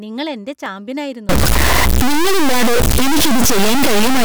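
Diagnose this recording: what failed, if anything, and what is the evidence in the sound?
A single sharp click at 0.66 s marks dropped samples. Under a millisecond is missing, so the waveform jumps. A driver or buffer slip is likely.

From 1.29 s to the end, distortion appears, and pauses fill with noise. This is a stuck bit, likely at the converter or its data lines.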